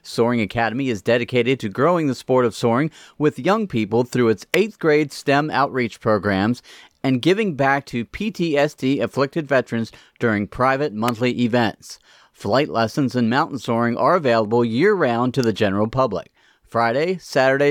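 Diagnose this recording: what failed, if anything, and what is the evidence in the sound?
Three sharp snaps sit on top of the speech, and they look like electrical switching spikes picked up in the analogue wiring. The first lands at 4.54 s, between "young people through its" and "eighth grade". The second comes at 11.08 s, after "afflicted veterans during private". The third is at 15.44 s, between "available year round to" and "the general public". Each one is at most a few milliseconds long. The first two peak around -5 dBFS, and the last is a little softer. The likely cause is a nearby switch, motor or static discharge arcing and coupling into the line.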